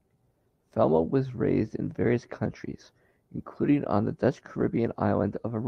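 From 4.59 to 4.61 s the speech turns briefly rougher and noisier, a lost packet rebuilt from error correction. The next packet carried a low-bitrate copy, decoded in place of about 20 ms of audio, consistent with a single lost packet. Unlike plain concealment, there is no dropout or smeared, repeated sound.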